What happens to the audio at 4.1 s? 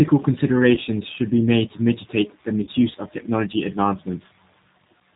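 At 4.1 s the speech carries the same G.729 codec damage heard across the whole clip, and it is plainly audible. The coder rebuilds each 10 ms frame from a vocal tract filter, a pitch predictor and a handful of pulses, so the speech sounds rough and slightly synthetic. The sparse detail points to a low bitrate around 8 kbit/s. On a spectrogram, energy stops sharply at 4 kHz, with smeared, blotchy harmonics below.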